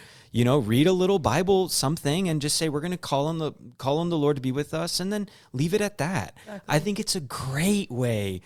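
No technical faults turn up anywhere in the speech, so there is nothing to describe in time order.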